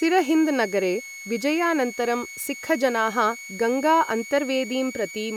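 A switching power supply in the recording chain is running in an audible burst mode or beating with another one, so a switching supply whistle near 2.2 kHz, wandering slightly, sits under this speech for the whole clip, roughly 15 dB below it.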